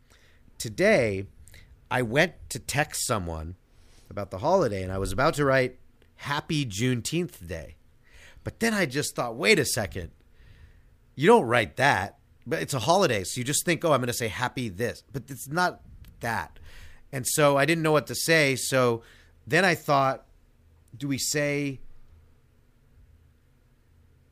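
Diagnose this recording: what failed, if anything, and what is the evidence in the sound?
Block size mismatch (padded) in the driver or buffer stage, from 7.59 to 8.43 s: the speech carries a 43.1 Hz buzz, which fits 1024-sample reads. Each short written block is zero-filled to that size, leaving tiny gaps that slow the audio by a factor of only 0.999.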